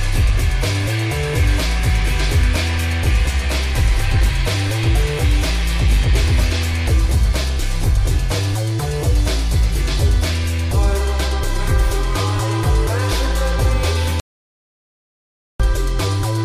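At 14.2 s the sound cuts off abruptly and returns at 15.6 s, an audio dropout to silence lasting about 1.4 s. The likely cause is input lost upstream while recording continued, writing silence. Unlike a pause, no room tone remains.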